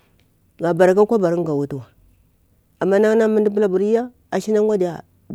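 A single sharp click at 3.47 s in the speech, likely from dropped samples: a few samples, well under a millisecond, go missing and the waveform jumps.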